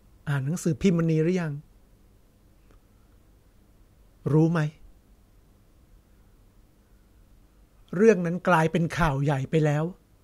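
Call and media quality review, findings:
Nothing stood out on listening to this speech recording.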